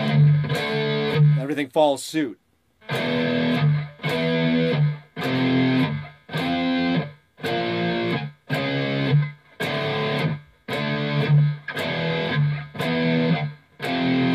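No technical faults can be heard anywhere in the audio.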